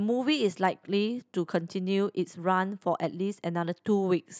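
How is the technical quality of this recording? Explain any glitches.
Nothing in the speech recording registers as a technical glitch; there are no faults to explain.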